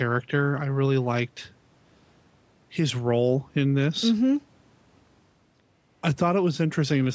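No technical faults are audible.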